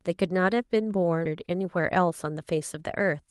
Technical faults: skip ahead; jitter buffer speed-up

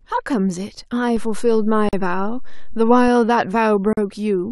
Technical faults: DC step; gap at a join of encoded pieces

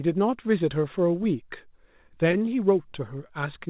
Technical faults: repeated packet loss (robotic sound); scattered short gaps

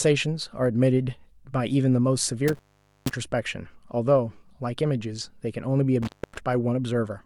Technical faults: intermittent contact

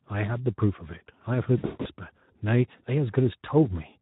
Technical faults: Speex codec; VoIP packet loss concealed by the speech codec

